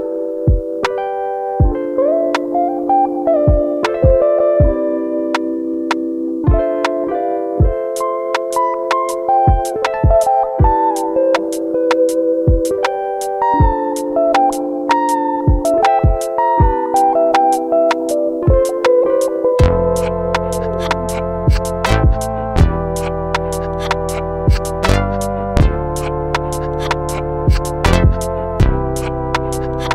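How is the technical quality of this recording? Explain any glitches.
No glitches can be heard anywhere in the recording, and the signal stays technically intact throughout.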